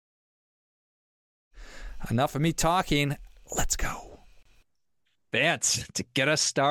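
The speech fades in smoothly by about 1.5 s. From 4.43 to 4.45 s, a gap at a join of encoded pieces opens: a 28 ms gap with smeared edges. Untrimmed encoder padding remains between the pieces.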